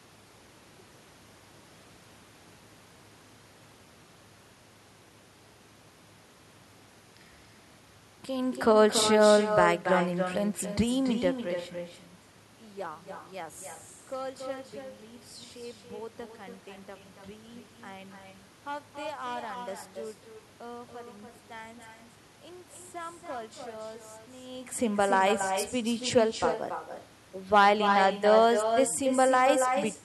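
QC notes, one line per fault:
Throughout, echo with no canceller: every phrase is trailed roughly a third of a second later by a copy about 6 dB down, thinner than the original. The far end's loudspeaker feeds its microphone, nothing subtracts it, and the sound returns after the network round trip.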